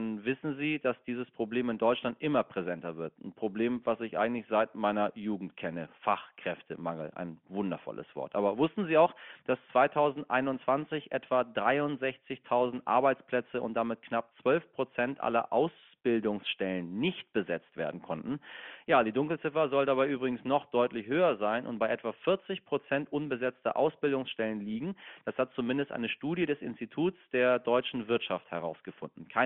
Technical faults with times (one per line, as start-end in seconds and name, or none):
none